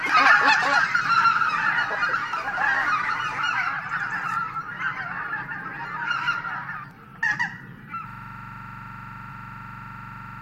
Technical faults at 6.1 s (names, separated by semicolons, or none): compressed frames skipped